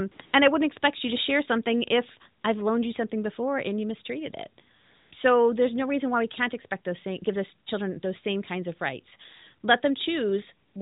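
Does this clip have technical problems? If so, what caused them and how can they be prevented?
Yes: AMR comfort noise at 0.12–0.20 s and 0.26–0.34 s before "and I wouldn't expect", 2.42–2.44 s, 4.76–5.12 s after "and you mistreated it", and 10.68–10.76 s. The phone treated these gaps as silence and sent no speech frames, so the real background was replaced by smooth synthetic noise that switches in and out. Turning off discontinuous transmission or tuning voice activity detection to be less aggressive would prevent it.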